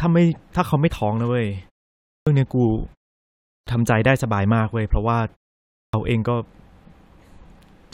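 Clipped start after a pause at 2.18, 3.58 and 5.85 s: after pauses of 0.56 to 0.71 s, the waking output swallows about 85 ms, so speech resumes abruptly.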